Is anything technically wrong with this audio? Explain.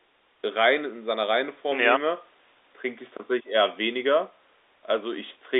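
No, nothing stood out as technically wrong on listening to this speech clip.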